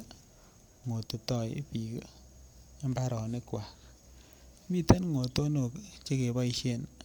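Nothing in the speech stood out as a technical problem on listening.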